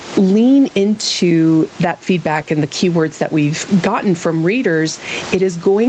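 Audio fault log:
throughout gain pumping: the level keeps swinging, by around 15 dB, so loud and soft passages of speech end up squashed close together. The likely cause is input gain set far too high, with a fast limiter or compressor pulling it down on each loud sound.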